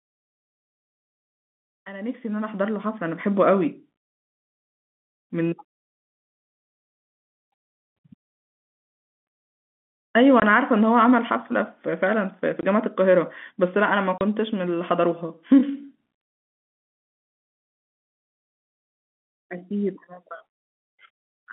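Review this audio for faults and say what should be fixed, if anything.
Packet loss filled with silence leaves abrupt holes of 20, 20 and 30 ms at 10.4, 12.61 and 14.18 s. Concealment would fill such gaps with smeared sound instead.

Enabling packet loss concealment, forward error correction or a larger jitter buffer would prevent these silent gaps.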